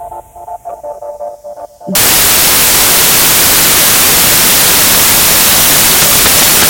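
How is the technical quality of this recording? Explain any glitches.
Poor: the second part is wrecked by one serious fault. From 1.95 s to the end, samples built from the wrong bytes turn the sound into loud, harsh broadband noise, because misassembled bytes promote the fast-changing low bits. The spectrogram fills with full-band noise and the waveform becomes dense fuzz.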